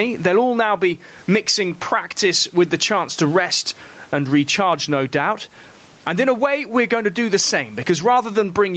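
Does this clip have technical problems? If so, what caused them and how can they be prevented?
Yes. Throughout the speech, the level swings by roughly 15 dB, so loud and soft parts sound squashed together. This is gain pumping, likely caused by microphone gain set far too high, so a fast limiter or compressor keeps pulling the level down on every loud sound. Lowering the input gain until the limiter rarely engages prevents it.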